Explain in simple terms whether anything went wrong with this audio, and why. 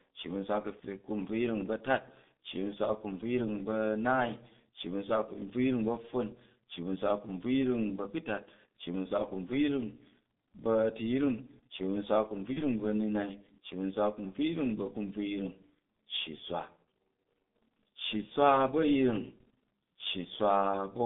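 The whole recording went through the G.723.1 codec, an old internet-phone codec that squeezes speech hard. Everything above roughly 3.6 kHz is gone, so the voice sounds muffled and a bit hoarse, and consonants blur together.

There's also a brief glitch from VoIP packet loss concealed by the speech codec, from 12.53 to 12.62 s. A tiny piece of audio, about the length of one 30 ms frame, went missing. The decoder filled the gap by guessing from what came just before, stretching the last sound into a short fading tone or noise, and the voice sounds off for a moment as it recovers.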